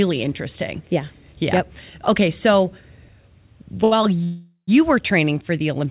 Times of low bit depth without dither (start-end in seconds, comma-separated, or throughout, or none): none